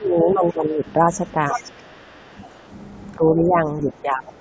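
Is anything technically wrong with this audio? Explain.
Yes. Two related problems appear in this speech recording.

Speech suppressed in double talk occurs from 0.0 to 2.68 s and again from 3.17 s to the end at 4.40 s. The speech repeatedly drops in level, by roughly 15 dB in the first stretch and around 20 dB in the second, for about one and a half seconds and about one second in total. This is likely an echo canceller turning the talker down while the far side was speaking. Network dropouts would leave gaps or warbles instead of this level-tracking dip.

The other side's voice leaking through is audible from 0.31 to 0.92 s, faint at roughly 25 dB below the speech, and from 1.27 to 2.45 s, stronger at about 15 dB below. A second voice sits under the talker, quieter. The likely cause is loudspeaker sound reaching the microphone and not being fully cancelled. It is a separate voice, not a delayed copy of the talker, so it is not room reverberation or the talker's own echo. 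The call's microphone processing leaves nothing above 8 kHz.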